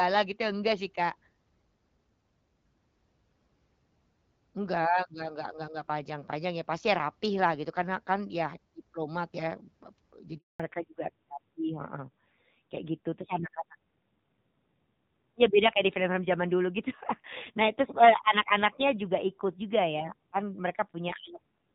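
A phone-call speech recording in which the sound cuts out completely at 10.38 s and stays silent for 220 ms, until 10.6 s. The sound falls away within a few tens of milliseconds and leaves a clean hole, with anything said in that stretch simply missing. This is a handover gap: the call was being passed from one network link to another, and no speech frames came through while the switch happened. Before the cut, the HD Voice path carries the sound with full wideband clarity and only light codec damage, which fits AMR-WB at around 12.65 kbit/s. From 10.6 s to the end, everything above 4 kHz is gone, and the sound turns muffled, duller and grittier. That is a fallback to narrowband: after the handover, the call dropped from the wideband codec to the older narrowband one. The coarser texture points to a low rate of around 7.4 kbit/s.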